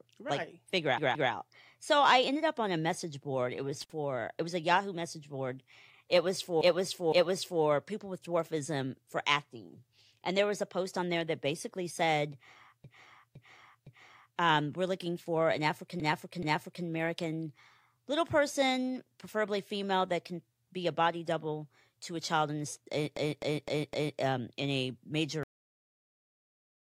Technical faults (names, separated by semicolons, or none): repeated frames; intermittent contact; cut-off end